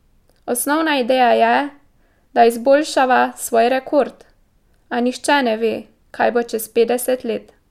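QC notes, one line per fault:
No fault found in this speech clip.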